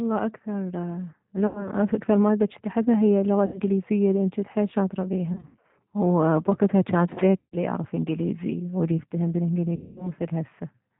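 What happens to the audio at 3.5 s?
At 3.46 s a run of VoIP packets went missing, about 80 ms of audio, consistent with four 20 ms packets, and the speech codec covered the hole with packet loss concealment until about 3.60 s. The decoder kept repeating its last pitch and vocal tract filter while turning the gain down frame by frame, so the speech smears into a buzzy tone or coloured noise that fades. Because each frame leans on the one before, the voice sounds weak or distorted for a short stretch after real packets resume.

That moment sits inside a continuous G.729 encoding, the G.729A variant at 8 kbit/s. This codec rebuilds each 10 ms frame from a filter model, a pitch predictor and a handful of pulses, and discards everything above 4 kHz. Around 3.5 s, as throughout, that gives the speech a plainly audible rough, synthetic, band-limited quality. The concealment sound is built from the same model, so it carries the same dull, narrowband colour.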